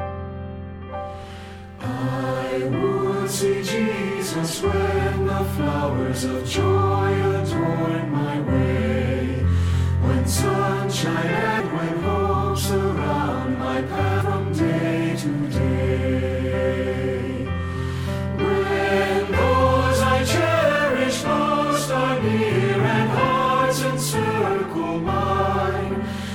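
The audio has compressed frames skipped at 11.59 s, 14.20 s and 25.07 s, where it jumps ahead by roughly 200 ms, 300 ms and 70 ms. This fits whole frames of about 26.1 ms being dropped.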